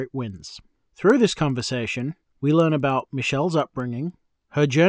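This is a speech clip with a steady ticking running through it from start to finish. The ticks repeat at 10 per second, one every 100 ms, and sit on the speech rather than the pauses. The fault is a resampler restarted on every block. Each 100 ms block was converted alone, which fits a change from 44.1 kHz to 16 kHz. The filter lacked real neighbouring samples at each edge, leaving a small error at every block boundary.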